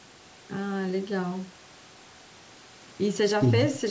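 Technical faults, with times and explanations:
No technical faults can be heard in this speech clip. It has passed through a call's microphone processing, so the lowest bass has been filtered out and nothing sits above 8 kHz, which is how that path normally sounds.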